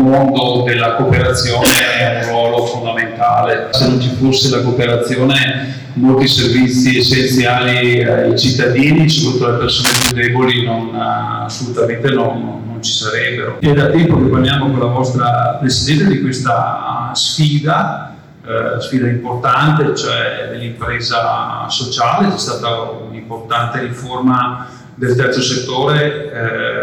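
A harsh fuzz rides on every loud moment from start to finish. This is hard clipping: the signal is driven about 14 dB past what the stage can pass, so a few percent of samples have their peaks sliced flat, spraying high harmonics across the spectrum.

From 1.64 to 1.80 s, and again from 9.84 to 10.12 s, a dense, uneven scratching rushes over the sound, first somewhat louder than it, then at roughly equal level. This is cable scratch noise, likely a worn cable, connector or control being moved so its contact resistance jumps rapidly.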